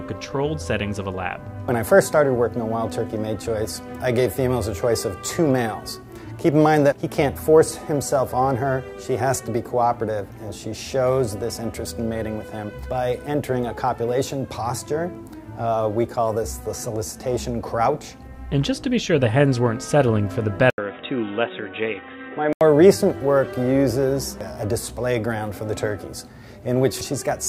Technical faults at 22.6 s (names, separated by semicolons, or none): input switched to a poorer device